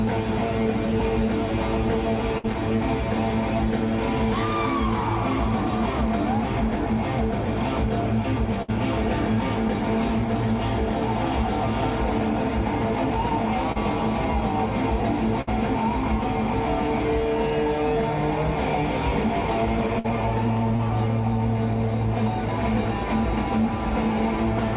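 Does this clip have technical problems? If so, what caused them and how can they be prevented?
Yes. At 2.38, 8.62, 15.41 and 19.99 s the sound briefly freezes into a held buzz or fading hiss, then jumps ahead. This is a burst of packet loss. About 60 ms of audio never arrived, and the receiver stretched the last sound across roughly 50 to 60 ms before resuming. It can be prevented with a steadier network path or forward error correction.

At 13.72 and 20.76 s there is a quick smear or wobble lasting about 30 ms. This is short concealed packet loss. Roughly 20 ms went missing, and the decoder extrapolated the preceding sound and blended back into the real signal. A slightly deeper jitter buffer and redundant packet coding would prevent it.

The call path itself cuts everything above 4 kHz, which fits a narrowband G.711 A-law codec.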